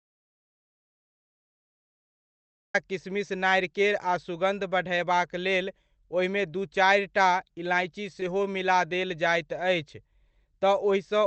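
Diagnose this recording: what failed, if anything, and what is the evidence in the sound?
The input was likely lost at the device or link, so an audio dropout to silence fills the start up to 2.74 s, silent with no room tone, before "किशमिश नारिकेर".

At 8.20 s, on the network side, short concealed packet loss left a 10 ms hole that the decoder filled with extrapolated speech, heard as a brief smear between "दू चारिटा इलाइची" and "मिला देल जाइत अछि".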